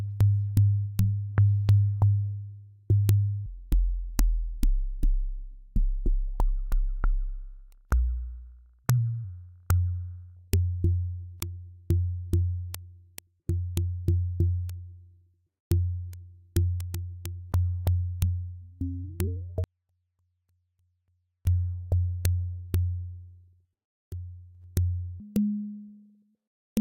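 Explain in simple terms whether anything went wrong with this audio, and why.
From 19.64 to 21.45 s the sound nearly vanishes but stays clean: a 24-bit alignment error, where 24-bit samples were read as full 32-bit numbers, shrinking them enormously.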